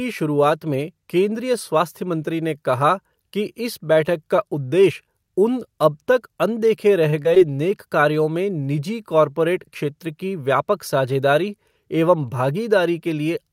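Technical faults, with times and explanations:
7.10 to 7.14 s, short stall from a late packet: a sound is held about 20 ms too long with a faint buzz or dip; the jitter buffer ran dry, nothing lost, delay grew 20 ms.
7.22 to 7.27 s and 7.35 to 7.38 s, short concealed packet loss: brief smears or wobbles where 20 ms each went missing and the receiver extended the preceding sound before blending back.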